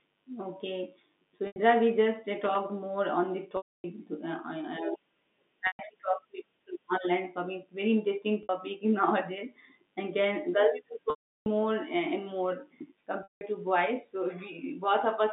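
Packet loss with pitch repetition interrupts this telephone-band speech at 1.47 s (90 ms), 3.57 s (270 ms), 5.67 s (120 ms), 8.43 s (60 ms), 11.1 s (360 ms) and 13.23 s (180 ms). The receiver loops the last pitch cycle, so the 60 ms and 90 ms gaps buzz briefly. The longer gaps fade to silence before the speech cross-fades back, and the gap lengths in 30 ms steps point to 30 ms packets. Loose connector crackle runs from 2.34 to 2.56 s as an irregular, scratchy burst, where a dirty or worn contact rapidly makes and breaks the signal path.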